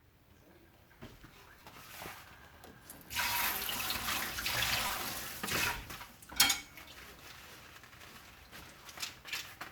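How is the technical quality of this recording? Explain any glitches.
The recording of everyday sounds has two brief playback glitches. At 1.60 s and again at 4.88 to 4.90 s, a repeated buffer occurs: fresh audio arrived late, so the device replayed its last block, which fits a 5 ms buffer. The first event repeats twice and the second four times, each costing around 10 ms and 20 ms of audio. Both are heard as a hard click or short buzz.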